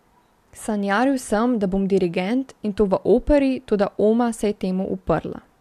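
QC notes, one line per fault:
No faults to note in this speech clip.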